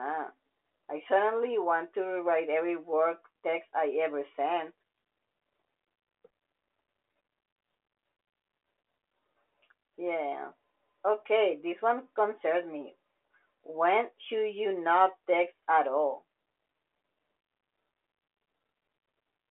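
Listening through this speech recording, nothing stood out as a technical problem.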